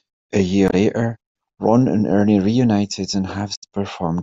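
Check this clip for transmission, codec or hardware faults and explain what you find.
Two brief bursts of damaged data in a compressed stream, at 0.67 to 0.74 s and 3.52 to 3.62 s. Corrupted frames make the decoder misread and lose sync, giving a short chirp, squawk, click or hole.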